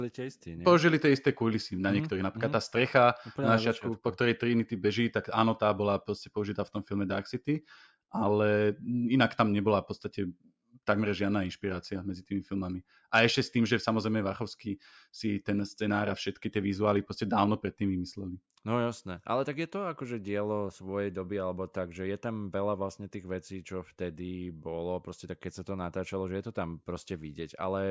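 No technical faults are audible anywhere in the speech.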